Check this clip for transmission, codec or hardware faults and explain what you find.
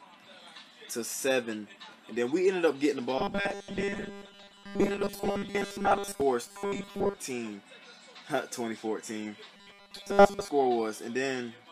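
One transmission fault appears three times: robotic sound from repeated short buffers, at 3.18–6.21 s, 6.47–7.17 s and 9.56–10.48 s. In each stretch the audio turns into a rigid, metallic buzz at 200 Hz that only loosely tracks the underlying sound. The likely cause is audio arriving too seldom, so playback fills the gaps by looping a segment of about 5 ms while the real material is skipped. Most of each stretch, roughly two thirds or more, is repeated rather than new.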